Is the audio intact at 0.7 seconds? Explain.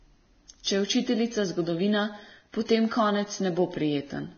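No. A brief pre-echo runs from 0.63 to 0.66 s, a short hiss of about 29 ms sitting just ahead of the attack near 0.7 s. The codec spread its quantisation noise across a whole block, so noise meant for the loud onset leaks into the quiet instant before it. Unlike a click or dropout, it is a soft smear that rises into the attack. Around it, the sound is hissy and grainy with nothing above 6.5 kHz, likely Vorbis compression at a low rate near 18 kbps, where coarsely quantised treble turns into noise. This steady, dull graininess persists, which sets it apart from momentary distortion or brief clipping.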